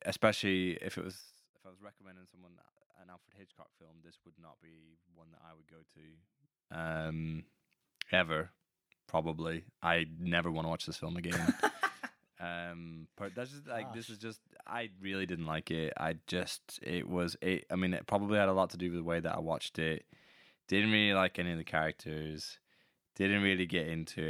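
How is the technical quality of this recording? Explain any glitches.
The level moves come with audible zipper noise in three places. Around 1.02 to 1.39 s the level drops about 25 dB in coarse 6 dB jumps; at 5.85 to 7.15 s it climbs about 25 dB in 2 dB steps; at 14.95 to 15.42 s it rises about 10 dB, again in 2 dB steps. Each time the gain is updated in steps about ten times a second, with no smoothing between them, so every jump leaves a small click, and you hear a ticking zip riding on the speech while the level shifts.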